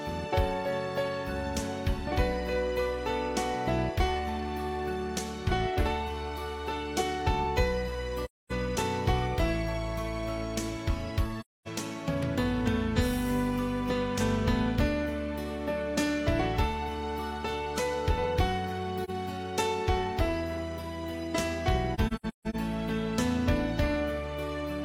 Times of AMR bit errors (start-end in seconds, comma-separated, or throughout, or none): none